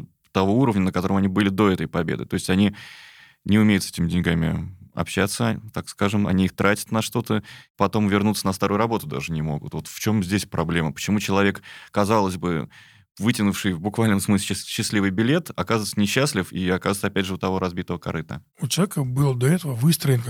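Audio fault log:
3.88–4.99 s and 8.99–10.84 s, drift correction step: just after "не умеют с" and again after "потом вернуться на старую", the speech slows by 5.46% and drops about a semitone (97 cents) at once, holds, then snaps back. This is likely a clock-matching rate step. The abrupt, steady offset distinguishes it from the gradual wavering of wow.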